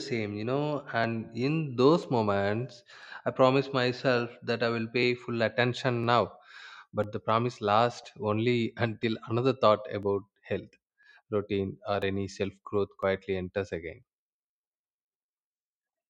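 A speech clip with periodic USB or driver dropouts: the audio path stalls every 1.0 s from 1.04 s to 16.02 s, skipping about a millisecond each time, which is heard as regular ticks in the speech.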